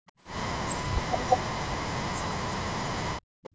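From 0.00 to 0.06 s the room background is gated by the echo canceller: while the far end's loudspeaker signal was active, the canceller pulled the microphone down by about 37 dB, so the ambient bed collapses to near silence for around 70 ms and then returns. Unlike a dropout in the signal chain, nothing is skipped or spliced. The background is simply turned down hard and brought back up, with the timeline intact.

Right after, from 0.07 to 0.12 s, a faint echo leak appears: a copy of the sound arriving 320 ms late and very low, around 35 dB under the main speech. It is most likely loudspeaker output that the far end's canceller failed to remove and sent back down the line. The fixed delay tells it apart from room reverberation, which would smear continuously rather than repeat a distinct, displaced fragment.

From 0.81 to 3.53 s the speech is suppressed in double talk, pushed down by as much as about 40 dB across roughly three seconds. 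With both sides active together, the echo canceller likely could not separate the local talker from the loudspeaker echo and attenuated everything. This distinguishes it from the brief background gating at the start, since here the speech itself is the casualty.

At 3.19 s, inside that suppressed stretch, there is a hard skip where audio goes missing between chunks. A piece of roughly 150 ms is gone and the two sides are butted together with no gap, likely lost while the processor closed one buffer and opened the next. The processor works in one-second chunks. Unlike the suppression around it, this is a discontinuity in time rather than a drop in level, and the splice tends to leave a small click. The call microphone processing passes nothing above 8 kHz.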